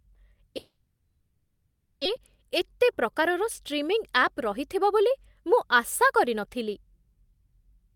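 From 0.57 to 2.07 s the speech smears into a fading buzz or hiss, then 0.18 s of silence, and 1.24 s never returns, likely a long network dropout. From 2.15 to 6.35 s the speech runs faster at unchanged pitch, 104% speed: a jitter buffer speed-up trimming pitch-period pieces, roughly a fifth of a second in total.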